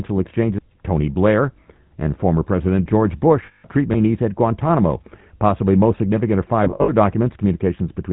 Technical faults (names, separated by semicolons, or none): GSM full-rate codec; lost GSM frames